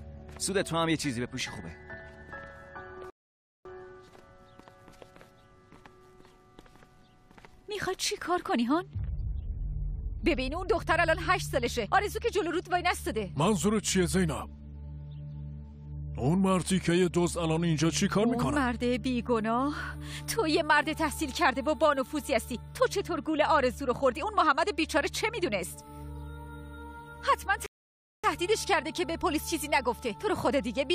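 At 3.1 s and again at 27.66 s the audio stops dead for a little over half a second, about 0.55 s and 0.57 s, then carries on from exactly the point where it broke off. These are rebuffering stalls: playback ran dry and waited for data. Unlike a dropout, nothing is skipped.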